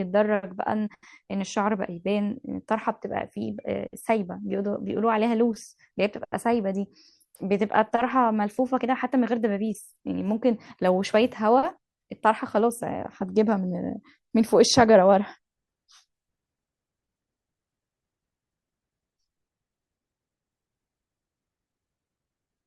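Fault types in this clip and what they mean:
No faults can be heard.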